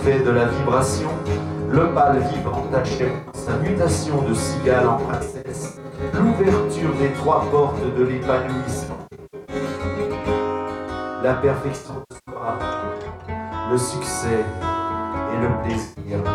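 Five smeared, phasey patches break up the audio, at 2.39 to 3.49 s, 4.93 to 6.15 s, 8.84 to 9.56 s, 11.76 to 12.48 s and 15.83 to 16.13 s. Each is a cluster of brief dropouts where the sound turns noisy and blurred without falling silent. This is AAC frame loss with concealment. Frames went missing in scattered runs, the longest about a tenth of a second or slightly more, and the decoder filled each gap by reusing the last good spectrum with altered phase and energy.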